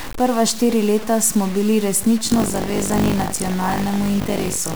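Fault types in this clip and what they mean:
Low bit depth without dither: Samples were likely truncated to about 5 bits without dither, so grainy distortion roughly 15 dB below the speech follows it throughout.
Buffer tearing: From 2.26 s, the writer and reader cross inside each buffer, so about a fifth holds audio roughly 70 ms old, giving a 50 Hz rattle.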